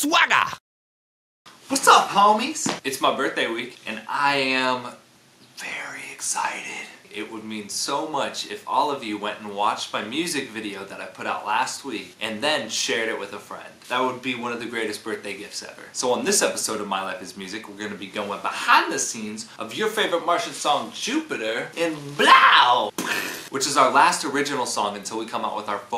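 No technical faults can be heard anywhere in the recording.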